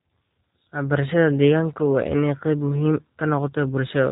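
Speech coded with G.729 throughout, and the damage is plainly audible: the sound is band-limited and a little rough and synthetic, which fits an 8 kbit/s codec rebuilding each 10 ms frame from a vocal tract filter, a pitch predictor and a handful of pulses. On a spectrogram, energy stops sharply at 4 kHz with nothing above, and harmonics look smeared in short frame-sized blocks.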